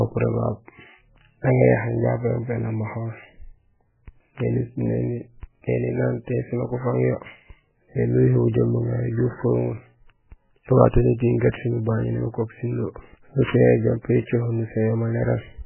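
Across the whole recording the audio was likely squeezed through MP3 compression at a very low bitrate, with heavy damage that fits something near 8 kbps. Starved of bits, the encoder removes everything above 3 kHz and zeroes the weaker frequency lines, which drop in and out from frame to frame. The speech comes out dull and muffled, with a watery, swirling texture, metallic chirps on s sounds, and consonant attacks smeared rather than crisp.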